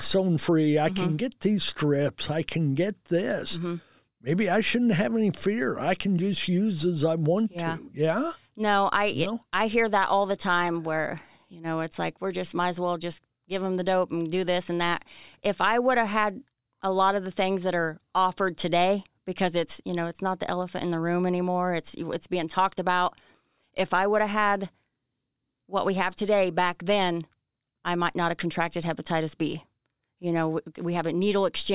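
No technical faults can be heard anywhere in the speech. At no point does anything in the recording or playback chain draw attention to itself.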